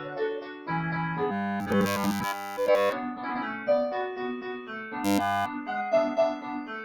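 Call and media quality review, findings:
Noise suppressor applied to music or sounds: pumping, thinning level throughout, swings of about 10 dB. A speech-tuned suppressor treats sustained tones and tails as noise.

Sound cut by the noise suppressor: sinking dips at 0.0–0.2 s (about 7 dB), 0.37–0.69 s (about 11 dB), 4.37–4.72 s (about 9 dB), and 6.37–6.71 s (about 7 dB). Held or decaying sound is cut hardest.

Robotic sound from repeated short buffers: rigid metallic 100 Hz buzz, 1.31–2.93 s and 5.05–5.46 s. Likely caused by a starved playback path looping a 10 ms buffer while the real audio is skipped.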